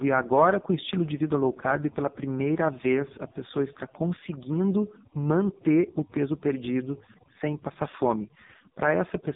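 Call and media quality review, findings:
Overdone noise removal, whole clip: background pulled to near silence with twinkling specks, quiet parts of speech drop out with the noise. Suppressor set too strong, gating bands near its noise estimate. Distinct from codec warble: the specks sit in silence, not smeared through speech.

AMR narrowband mobile codec, throughout: nothing above 3.8 kHz, heavy buzzy, synthetic coloration on the speech. The pulse-excited vocal-tract model is starved of bits, which points to a low AMR-NB mode, around 5.15 kbps. Unlike a plain low-pass filter, the damage is a synthetic buzz, not just muffling.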